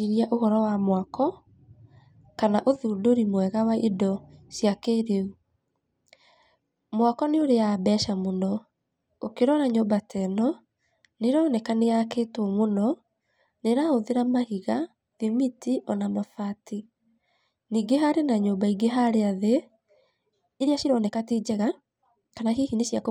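From 20.58 s to the end at 23.11 s, the speech was most likely run through a time-stretching process that squeezed it to fit a shorter length, playing it about 1.42 times faster while holding the pitch by discarding short slices of the waveform. The result is a time-stretched section: the pace jumps abruptly at 20.58 s and the delivery turns rushed, yet the pitch stays unchanged.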